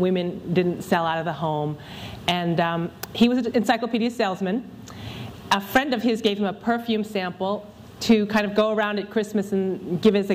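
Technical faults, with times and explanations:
0.11–10.33 s, clock slip clicks: faint, regular ticks about every tenth of a second, likely from two unsynchronised clocks drifting apart by around 300 ppm, each slip dropping or repeating a single sample. A spectrogram shows thin, evenly spaced vertical lines, and the waveform shows tiny step discontinuities.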